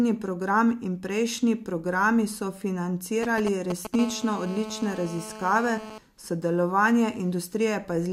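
From 3.23 to 3.96 s, GSM signalling bursts break in: a nearby 2G phone sends short radio bursts that the audio circuit rectifies, giving a galloping dit-dit-dit of brief 217 Hz buzzes almost as loud as the speech. A spectrogram shows clustered vertical stripes; the waveform shows spiky packets.

At 3.99 s this turns into steady GSM phone buzz that lasts until 5.98 s. The phone is now in a call and transmits continuously at 217 bursts per second. The result is a hard, raspy buzz about 14 dB below the speech, with a comb of harmonics stacked at 217 Hz spacing across the spectrogram and a regular pulse train in the waveform.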